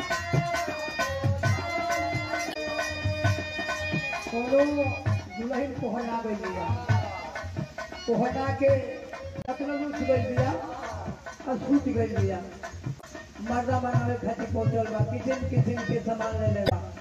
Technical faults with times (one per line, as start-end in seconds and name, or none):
2.50-2.57 damaged data in a compressed stream
9.42-9.49 damaged data in a compressed stream
12.97-13.04 damaged data in a compressed stream
16.65-16.72 damaged data in a compressed stream